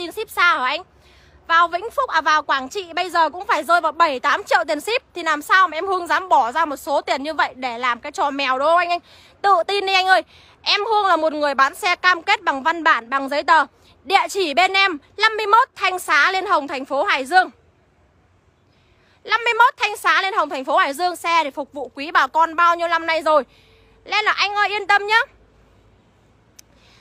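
No technical faults can be heard anywhere here.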